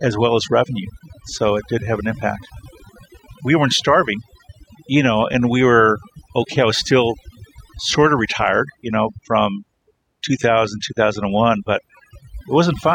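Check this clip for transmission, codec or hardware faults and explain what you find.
There is one fault. Overdone noise removal, present throughout: the reducer cuts any frequency band near its noise estimate, so the background collapses into twinkling specks and quiet parts of the speech go with it.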